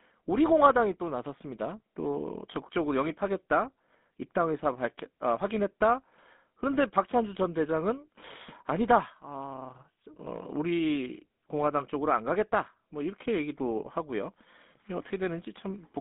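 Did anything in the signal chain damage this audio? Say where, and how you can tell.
Yes. Throughout, the speech sounds buzzy and gravelly within a 200 Hz to 3.6 kHz band. That points to the codec stage: GSM full rate rebuilds sound from coarse, pulse-spaced excitation.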